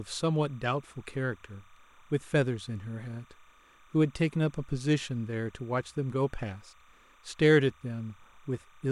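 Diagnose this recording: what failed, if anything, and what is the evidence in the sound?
Timecode bleed in the analogue wiring: 30-frame linear timecode leaks from an adjacent line, so a faint warbling chirp near 1 and 2 kHz runs throughout, well below the speech.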